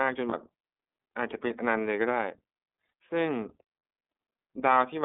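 From start to finish the speech sounds thin, boxed-in and faintly rough, with a synthetic edge to the voicing and nothing of the bass or the upper brightness. That is the iLBC codec at work: the audio sits in a narrow band of roughly 250 Hz to 3.6 kHz, and each 30 ms frame's excitation is coded independently, which fits the 13.33 kbps mode. The coding damage is plainly audible throughout.

At 0.29 s and again at 2.87 s there is a brief smeared, buzzy hold, as if the sound freezes on a breathy vowel for about 30 ms before snapping straight back. These are lost iLBC frames, each consistent with a single missing 30 ms frame. The decoder fills the gap by repeating the last pitch cycle blended with noise. Because the following frame decodes without depending on the lost one, the speech recovers almost immediately.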